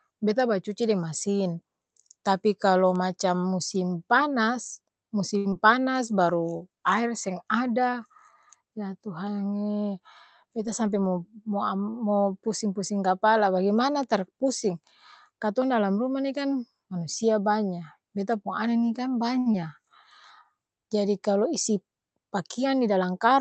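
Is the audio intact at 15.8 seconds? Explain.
Yes, the speech at 15.8 seconds is intact, with nothing wrong at that moment.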